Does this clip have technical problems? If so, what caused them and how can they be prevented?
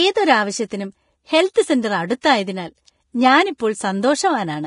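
Yes. Vorbis compression runs through the whole speech clip. Nothing remains above about 10.5 kHz, and the treble left below that cut-off has turned hissy and grainy, with roughened tones. The damage is heavy, which points to a low bitrate, around 31 kbps. At that rate the coder keeps only a smooth outline of the spectrum and quantises the fine high-frequency detail so coarsely that it comes back as noise of similar energy. This is likely the result of an aggressive Vorbis encode. Encoding at a higher quality setting, or keeping a lossless master, would avoid it.

Pre-echo appears at 1.54 to 1.56 s, 2.21 to 2.24 s and 3.58 to 3.60 s. At each point a short hiss, about 21 to 25 ms long, comes just before a sharp onset, and the onset itself sounds softened. The transform coder spreads its quantisation noise across a whole block. When an attack lands late in the block, the noise sized for the loud part also fills the quiet stretch ahead of it. 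A higher bitrate, or an encoder that switches to short blocks on transients, would prevent this.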